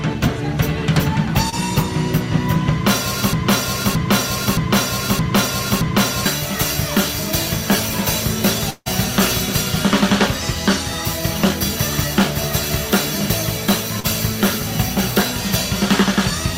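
The audio has three kinds of fault. Short concealed packet loss occurs twice, from 1.49 to 1.54 s and from 14.00 to 14.06 s. In each case a small piece of the stream, about 20 ms and then about 40 ms, did not reach the decoder in time. The receiver bridged the gap by extending the preceding sound for 29 ms and 39 ms respectively before crossfading back into real audio, which leaves a brief smear or wobble where detail is missing. From 3.33 to 6.26 s there is a broken-record loop: a 0.62 s fragment repeats exactly, back to back, five times, and whatever should have played across those three seconds is gone. The exact repetition points to a stall somewhere in the player, encoder or stream, which most likely kept resending the last buffered fragment until it recovered. From 8.70 to 8.88 s there is a long network dropout. About 160 ms of audio is missing. For roughly 0.15 s the gap is filled by a continuation of the last sound that decays into a fading buzz or hiss, followed by about 30 ms of silence before the audio resumes further along, without the lost section. 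The pattern is consistent with a likely interruption in packet delivery lasting longer than concealment can cover convincingly.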